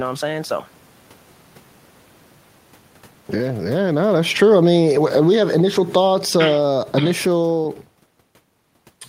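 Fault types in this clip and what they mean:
Automatic gain falling: the gain control judged the input too loud or its background noise too strong and wound its gain down gradually, from about 3.61 s to 7.68 s, for a total drop of about 8 dB. The speech sinks steadily across that stretch, and the room noise sinks with it. That shared fall marks it as a level change in the system, unlike the talker's own movements near 3.5 s and 7.5 s, which shift only the voice.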